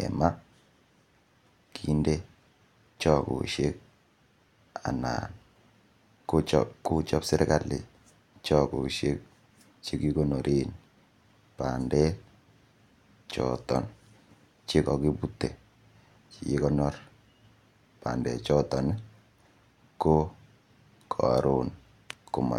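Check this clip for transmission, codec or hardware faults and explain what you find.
No faults detected.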